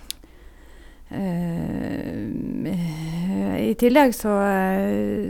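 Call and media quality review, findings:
No audible faults found.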